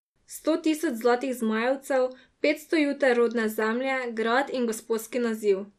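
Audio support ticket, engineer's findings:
Speech dull, gurgling, granular throughout. Likely MP2 compression near 80 kbps: upper sub-bands starved of bits, switched off. Spectrogram: patchy, flickering blocks above a ragged cutoff.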